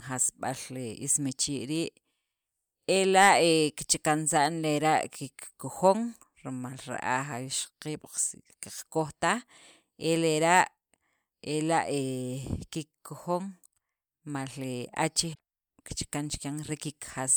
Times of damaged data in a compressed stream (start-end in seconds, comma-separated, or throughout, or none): 15.32-15.40